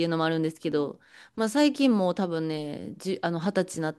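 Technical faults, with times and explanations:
0.72 to 0.74 s, overlap between stream segments: at this point two consecutive chunks of the speech stream were stamped as sharing about 25 ms of time, so the player discarded that span as if it were duplicated, though the audio there was unique. The waveform jumps straight from one point to a later one, leaving a tiny skip in the speech. It fits a stream cut into 2-second segments.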